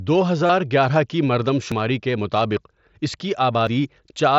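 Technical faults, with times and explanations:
0.46 to 0.49 s, concealed Bluetooth headset packet loss. A short run of headset packets went missing, roughly 30 ms of sound, which fits about four lost frames. The receiver filled the hole by repeating the closest-matching stretch of the waveform it had just played. The patch holds full level and takes on a brief buzzy, tonal quality. A slight warble follows as real audio resumes on "گیارہ کی مردم". The mSBC wideband link carries the rest, with its light graininess.
1.72 s and 3.67 s, audio missing between chunks. Two abrupt skips break the flow. The first falls between "گیارہ کی مردم" and "کے مطابق اس کی". The second comes right after "کے مطابق اس کی". Each drops a few tens of milliseconds, and the edges are butted together with no silence. The skips sit about 2 s apart, which points to a recorder likely handling audio in 2-second chunks and losing a piece at each handover.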